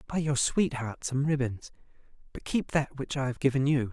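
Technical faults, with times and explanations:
No technical faults can be heard in this speech recording.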